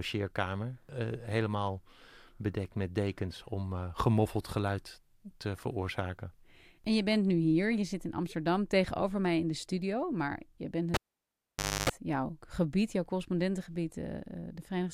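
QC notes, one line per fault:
10.94–11.89 s, cable pulled and plugged in: a live connector is yanked out and pushed back, breaking the signal path for about 0.90 s. Removal gives a sharp pop, then the speech drops to near silence. While only the plug tip makes contact the shield is not grounded, so 50 Hz mains hum leaks in as a buzz lasting about 0.29 s. Full reinsertion gives a second pop as the speech snaps back.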